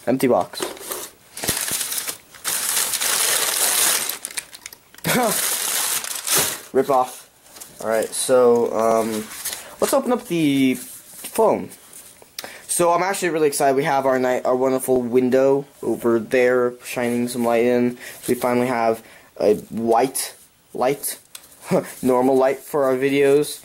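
At 1.49 to 1.74 s there's a loud pop, actually two, roughly 10 dB above the sound, likely a voltage step from a plug, switch or static.

Then the overlapping chunks start: at 2.87, 5.89, 8.91, 11.94, 14.96, 17.98 and 21.01 s, each 3 s chunk replays about 23 ms, giving a regular stutter.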